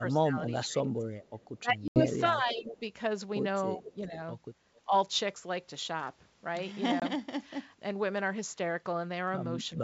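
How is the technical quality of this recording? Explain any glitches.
The recording has clear faults: repeated speech suppression in double talk, brief echo leaks, and two packet-loss gaps. The G.722 wideband coding underneath sounds clean.

Speech suppressed in double talk occurs at 0.0–1.17 s, 1.57–2.81 s, 3.76–4.14 s, 4.86–4.94 s and 9.76–9.83 s. The speech dips by up to about 20 dB. An echo canceller likely confused both sides and turned the speech down.

Echo leak appears at 1.23–1.48 s, 3.85–4.04 s and 4.75–4.81 s. It is a faint copy delayed about 420 ms, reaching about 15 dB below the speech at 3.85 s. It is likely residual loudspeaker echo.

Packet loss on an ADPCM call leaves hard-edged silent holes. The first, at 1.88–2.03 s, loses 80 ms, fitting about four packets. The second is 20 ms at 7.00 s. Afterward the decoder briefly re-syncs, leaving the speech slightly distorted.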